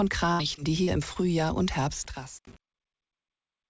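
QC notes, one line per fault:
0.32–1.17 s, repeated packet loss (robotic sound): four gaps, the longest 74 ms, each patched by repeating the last sound, giving choppy stretches with pieces missing.
1.90–3.70 s, truncation distortion on a fade: the fade-out beginning around 1.9 s is quantised too coarsely without dither, which fits roughly 7 bits, so its quiet tail turns gritty.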